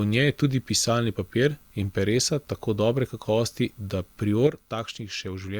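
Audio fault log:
4.47–5.59 s, one channel drops out: likely a lost stereo channel after "tako dobre kakovosti da", so the mono sum falls abruptly by about 6 dB to the end.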